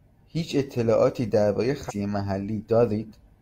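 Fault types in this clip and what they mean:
Damaged data in a compressed stream: a short stretch of the encoded speech got mangled, so the decoder choked on those frames, lost its footing and had to hunt for the next clean frame header before carrying on. You hear it as a quick blip from about 1.86 to 1.93 s, roughly 70 ms of disruption breaking into the speech before things snap back to normal decoding.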